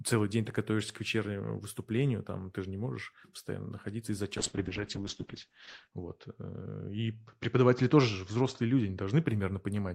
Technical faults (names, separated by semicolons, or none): call bitrate drop